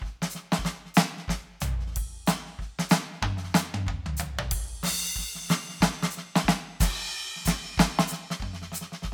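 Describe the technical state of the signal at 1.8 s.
At 1.8 s the music plays through intact, with no dropout, distortion, glitch or other fault at that moment.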